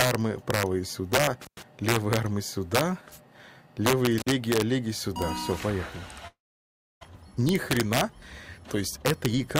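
Throughout the clip, an integer overflow occurs: the gain drives the signal about 5 dB past the integer limit, so the loudest peaks wrap to the opposite sign and crack violently.

From 1.42 to 1.63 s, an intermittent contact opens the line for about 105 ms, cutting the sound out with crackle at both edges. The same fault returns from 4.18 to 4.29 s, with a shorter break of about 50 ms.

From 6.27 to 7.05 s, the last sound is carried on and fades, then drops to silence before returning with roughly 0.6 s missing. This is likely a long network dropout.

From 7.39 to 8.05 s, a jitter buffer speed-up trims short pitch-period slices, about 50 ms in all, so the audio runs about 6% faster at unchanged pitch and sounds hurried.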